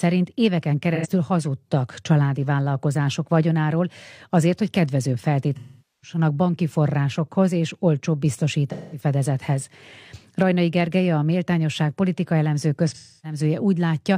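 AAC frame loss with concealment occurs in this speech four times: at 0.95 to 1.07 s, 5.55 to 6.18 s (after "vagyonáról azért hogy kedvező", before "banki forrásokhoz és olcsóbb"), 8.71 to 9.03 s (after "banki forrásokhoz és olcsóbb"), and 12.89 to 13.39 s. The decoder rebuilt the missing stretches from the last good spectrum. The brief 85 ms gap sounds like a smeared, phasey blur. The longer 213 to 469 ms gaps, which point to runs of roughly five to eleven lost frames, decay toward silence before the sound fades back.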